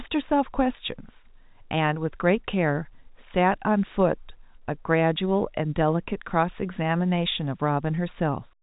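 Nothing is technically wrong with this speech clip, which carries the narrow band of G.711 telephone coding with no sound above about 3.8 kHz.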